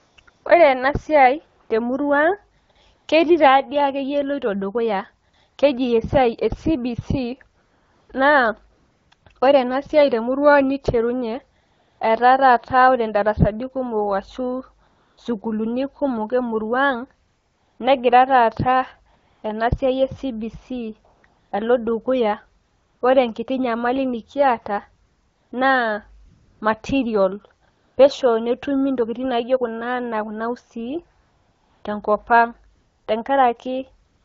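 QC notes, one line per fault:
0.00–34.24 s, AMR comfort noise: 28 gaps, 20 ms to 620 ms long (longest 31.21–31.83 s; one ends just before "ore ena siai te"). The sender judged the talker silent and stopped sending speech frames. The receiver filled the gaps with smooth synthetic noise, so the background switches in and out.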